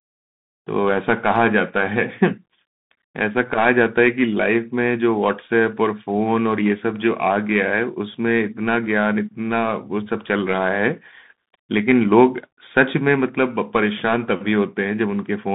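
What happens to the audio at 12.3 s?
Bluetooth CVSD headset codec damage is present at 12.3 s, as it is across the whole clip. The speech is carried as a single up-or-down bit per sample, consistent with a 64 kbps stream, with a step size that adapts to the signal. The band is held to about 150 Hz to 3.7 kHz, so the speech sounds thin and boxy. Loud high sounds outrun the step and distort, s sounds turn scratchy, and a granular hiss sits underneath.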